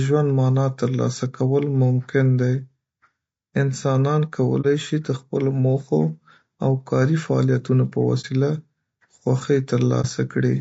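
Throughout, the speech sounds rough and grainy, with noise filling between harmonics on a spectrogram, likely from low-delay AAC compression at a low bitrate. At 4.61–4.66 s, 8.21–8.25 s and 10.01–10.06 s, AAC frame loss with muting leaves brief dips. Each frame's spectrum was zeroed, appearing as a brief blank column and a tapered dip in the waveform.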